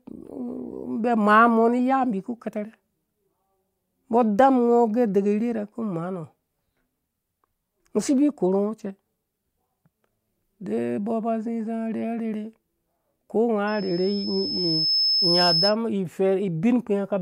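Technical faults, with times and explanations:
13.67–15.76 s, loudspeaker feedback squeal: a thin, piercing tone at 5.2 kHz creeps in and swells over about a second and a half until it sits roughly 5 dB above the speech. The mic is hearing its own loudspeaker, and at that one frequency the round trip comes back louder than it went out, so every pass through the loop feeds it more. It cuts out at 15.76 s.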